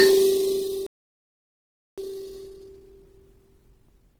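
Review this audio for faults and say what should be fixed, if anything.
Throughout the music, a smeared, grainy texture suggests transcoding between lossy codecs, likely a WMA-type encode re-coded to low-rate Opus, stacking artefacts.

From 0.87 s to 1.98 s the music cuts to silence for about 1.1 s, a playback stall, likely the player running dry of buffered data.

From 1.98 s to 4.19 s the music runs at 1.1 times speed with unchanged pitch: time-compressed catch-up, splicing out small segments.

Encode once from the original source, and give the player a larger buffer so it neither runs dry nor needs to rush afterwards.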